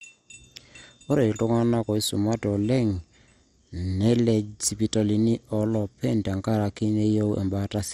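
Throughout the speech, the sound is dull and gurgling, with a granular roughness. Nothing is heard above 15.8 kHz. This is likely MP2 compression at a starved bitrate, near 64 kbps. Upper sub-bands drop out and flicker, and the remaining bands are coarsely quantised.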